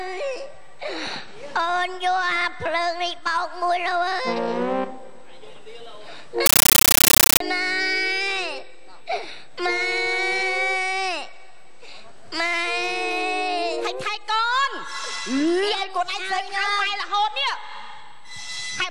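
From 6.46 to 7.40 s the audio gives way to very loud, chattering static, bursts of about 13.3 ms repeating 31.25 times a second. This is a compressed stream played as audio: AC-3 data, which fits a 640 kbps stream, was reproduced as raw samples instead of being decoded.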